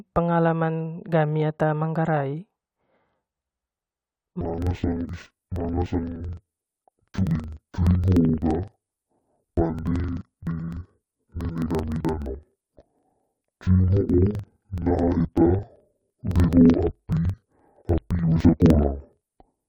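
From 4.41 s to the end, interleaved audio is read as planar. Each 42.67 ms block plays an octave low, doubled and choppy, at 23.4 Hz.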